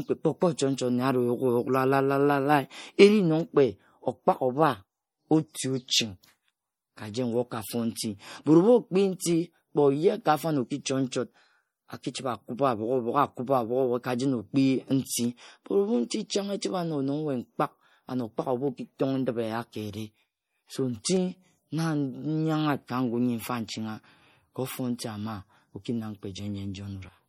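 MP3 compression runs throughout the speech, plainly audible as a watery, swirly texture. Weak frequency lines drop in and out from frame to frame, and nothing remains above 19.6 kHz. The likely cause is a low-bitrate encode, which fits about 48 kbps.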